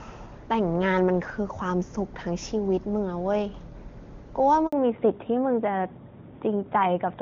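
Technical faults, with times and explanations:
4.67 to 4.72 s, handover gap: the sound drops out for about 60 ms as the call hops from one network to another. No speech frames got through while the link switched, so the audio fades within a few tens of milliseconds and sits silent until the new connection picks up. Whatever was said in that window is simply gone, leaving a short hole right where the two links meet.
4.72 s to the end, fallback to narrowband: right after the gap, everything above 4 kHz disappears and stays gone. Before this point the HD Voice path is clean and bright, with little or no codec damage and the full wideband range intact. After it, the sound turns duller, boxier and a bit rougher. That fits the call landing on an older narrowband codec, something like AMR-NB at its top rate, once the handover finished.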